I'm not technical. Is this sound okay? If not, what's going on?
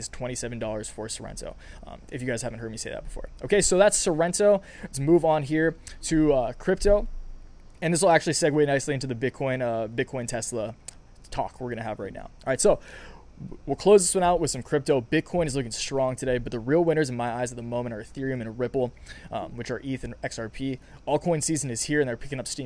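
Yes, no faults to hear.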